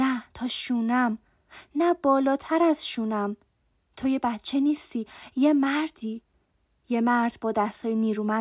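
No technical faults are audible.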